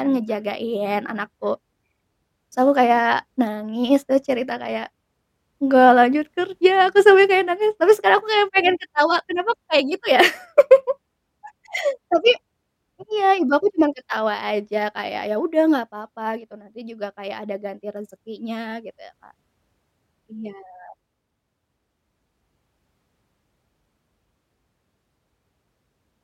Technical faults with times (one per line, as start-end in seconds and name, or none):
none